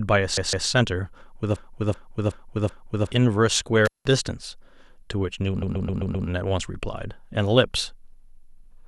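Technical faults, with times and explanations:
0.37–0.68 s, repeated frames: a 157 ms slice stutters, heard twice more, because compressed frames were resent; this adds 0.31 s.
1.56–3.12 s, broken-record loop: a 377 ms fragment repeats four times back to back, likely a stalled stream resending its last fragment, so the intended audio is lost.
3.85–4.08 s, intermittent contact: sound drops out for 179 ms, with crackle at both edges and faint hiss, as a loose connection briefly opens.
5.62–6.27 s, repeated frames: a 131 ms block stutters through five extra plays, because resent frames decode again; this adds 0.65 s.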